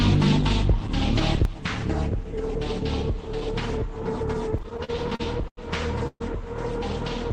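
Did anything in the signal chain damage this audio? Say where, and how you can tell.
Yes. At 1.45 s the whole signal, background noise included, drops by about 6 dB in one step and stays there to the end. This sudden gain jump likely came from a gain change applied without a ramp in the driver or processing stage. The waveform envelope shows a sharp, uniform step.

From 4.51 to 5.59 s the audio drags through repeated stalls (stutter): ten short gaps, the longest 90 ms, together about 237 ms or 22% of that stretch, each filled by continuing the last sound. This is a network and jitter-buffer fault. The spectrogram shows repeated smeared, stretched patches.

From 6.07 to 6.22 s a call audio freeze holds the last sound for about 133 ms, fading to roughly 60 ms of silence before the audio resumes where it stopped. The likely cause is late packets emptying the jitter buffer. The spectrogram shows a flat, decaying band ending in a blank gap.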